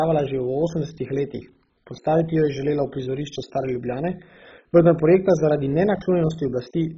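Throughout the speech, a dull, gurgling granularity points to likely heavy MP2 compression near 16 kbps. A spectrogram shows flickering bands and nothing above 7.5 kHz.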